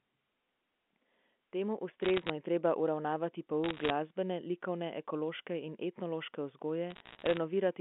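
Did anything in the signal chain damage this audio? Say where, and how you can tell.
Yes, at the network stage. Bit errors on a digital phone line put bursts of sharp ticks over intact speech at 2.03–2.30 s, 3.64–3.90 s and 6.90–7.38 s. Each flipped bit corrupts one G.711 sample. Sign and high-bit hits click loudest, and the middle burst is densest.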